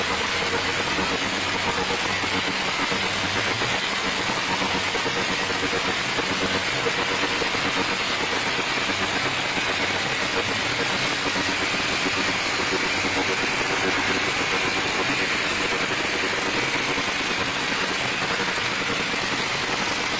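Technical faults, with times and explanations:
15.64 to 20.19 s, time-stretched section: the pace abruptly jumps to 1.35 times the earlier rate and stays there to the end, while the pitch holds steady, so the audio turns rushed. This is likely software squeezing the passage to fit a set length, preserving pitch by discarding short slices of the waveform. Dropping those slices gives the hurried texture, within the same 7 kHz band ceiling as the rest.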